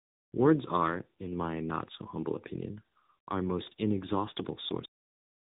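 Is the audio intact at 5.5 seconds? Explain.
No. At 5.5 s the clip is inside a cut-off end that runs from 4.85 s to 5.59 s. The final buffers were never written or played, so the speech stops mid-sound at 4.85 s and falls straight to digital silence with no decay.

The speech leading up to that point also carries tandem speech coding throughout. It passed through CVSD, then G.711 mu-law, then AMR-NB at 7.95 kbit/s, with each coder re-encoding the previous one's degraded output. The result sounds rough, muffled and warbly, with nothing above 3.8 kHz.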